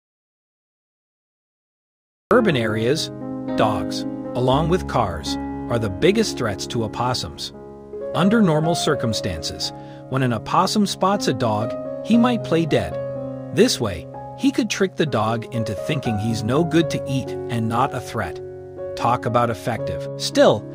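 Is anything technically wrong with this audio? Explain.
Yes. The audio opens in an audio dropout to silence: from the very start until 2.31 s there is dead silence with no room tone, then sound arrives mid-flow. The input signal was likely lost while the recorder kept writing silence, so whatever came first is missing.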